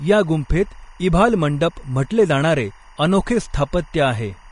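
Speech runs throughout with a faint timecode bleed, a chirping warble flipping between roughly 1 kHz and 2 kHz, clocked at 23.976 frames per second and set well below the voice. Unlike a steady tonal whine, it alternates pitch in a rhythmic pattern. The audio is also grainy and hissy, with nothing above 10.6 kHz, likely from Vorbis compression at a low rate that points to around 34 kbps; its treble turns to noise rather than ringing pre-echo.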